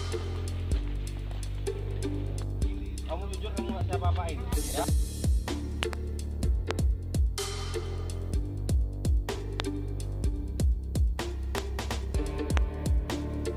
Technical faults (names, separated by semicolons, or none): loud pop